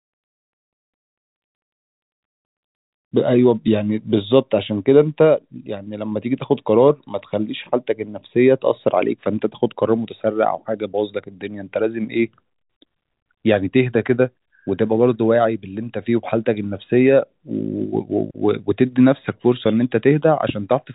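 No technical faults can be heard anywhere in this speech. G.711 telephone coding is audible as a hard ceiling near 3.8 kHz, leaving the band-limited, narrow sound of a fixed phone line with at most a faint, level-following graininess.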